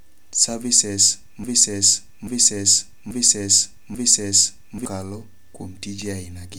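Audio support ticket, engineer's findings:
Broken-record loop, 1.44 to 4.85 s: one 0.84 s chunk of speech repeats identically, back to back, four times. Underlying speech for that span is missing. Likely cause: player, encoder or stream stalled and kept re-sending its last held fragment until data resumed.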